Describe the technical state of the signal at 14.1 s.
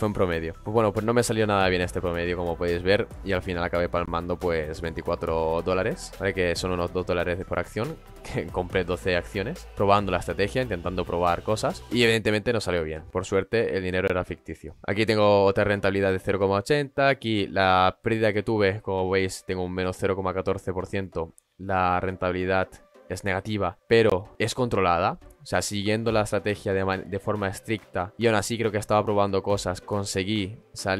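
At 14.08 to 14.10 s there is a gap between chunks: a 20 ms hole of silence. The audio arrives in 10-second chunks, and silence is left at this join, so the sound is briefly interrupted rather than lost.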